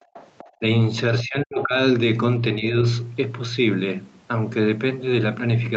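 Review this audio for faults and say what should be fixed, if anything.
From 0.00 to 0.14 s the room sound drops away sharply, by about 27 dB at its deepest, for about 150 ms in all, then comes back. This is background gated by the echo canceller: while the loudspeaker was active, the canceller pulled the microphone down hard, taking the ambient noise with it. What sets it apart from double-talk suppression is that only the background dips here, with no near-end voice being cut. Gentler residual-echo suppression, or comfort noise filling the gap, would stop the background from going silent.

Between 0.14 and 0.50 s a second, fainter voice is audible underneath, sitting roughly 25 dB below the main talker. The likely cause is the other side's voice leaking through: the far-end audio played on the device's loudspeaker and was not fully removed by the echo canceller. Unlike crosstalk on the line, it is sound re-captured acoustically through a speaker and microphone. 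Better echo-path convergence, lower speaker volume or a headset would keep it out.

The talker's own voice dips three times: 0.54–0.62 s, deeply, at roughly 35 dB; 1.23–1.76 s, at roughly 25 dB over about 400 ms; and 2.58–2.76 s, a milder dip of around 10 dB. These are speech suppressed in double talk, likely from the canceller clamping down while both sides spoke at once. Unlike the earlier background gating, the losses land on the near-end speech itself rather than the room. A stronger double-talk detector that holds suppression back when the near end is active would prevent it. The cut above 8 kHz from the Opus call path at 48 kbps is expected for this bandwidth and needs no fix.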